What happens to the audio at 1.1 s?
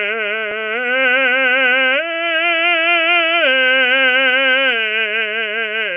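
Nothing goes wrong at 1.1 s: the music plays through that moment cleanly, with no dropout, click, distortion or other fault to be heard.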